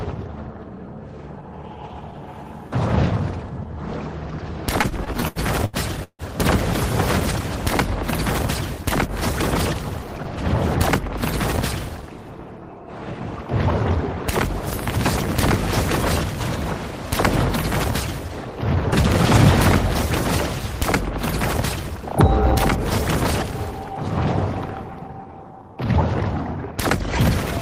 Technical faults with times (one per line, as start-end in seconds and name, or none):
4.81-6.22 repeated stalls (stutter)
11.73-12.18 jitter buffer speed-up
18.28-18.53 jitter buffer speed-up
21.13-26.77 jitter buffer speed-up